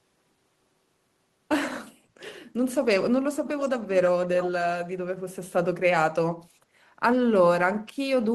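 At 3.45 to 3.7 s, and again briefly at 4.39 to 4.5 s, there's an echo leak: a faint copy of the speech about 322 ms late, louder the second time. Likely a far-end echo canceller letting loudspeaker pickup slip back through.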